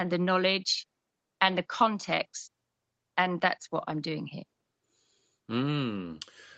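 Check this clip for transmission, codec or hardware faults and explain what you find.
No transmission, codec or hardware faults.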